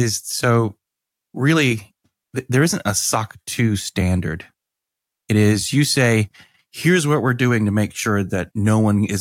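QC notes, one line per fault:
No faults detected in the speech recording.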